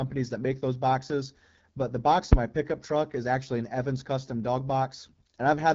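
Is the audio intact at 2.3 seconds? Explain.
No. From about 2.33 to 2.38 s there's a phantom power thump. It's what you get when a supply is switched on a live input: the sudden voltage step pushes through the coupling capacitors and comes out as a deep, low bump rather than a click. Here it dies away quickly, with a tail of roughly 12 ms, so it lands as a short, dull knock cutting into the speech.

That moment also sits inside the AMR wideband (HD Voice) codec damage that runs through the whole clip. The speech has that rough, raspy, buzzy edge, which fits the 8.85 kbit/s mode, one of the lowest AMR-WB rates. At that rate the pulse-driven vocal tract model can't track the voice cleanly. Above roughly 6.4 kHz the top is filled with shaped noise, and nothing at all comes through past 7.6 kHz.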